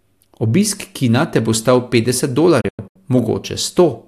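After "te bo stal petdeset", from 2.61 to 2.96 s, a digital broadcast dropout mutes failed frames in quick-fading holes up to 96 ms, seen as blank vertical gaps.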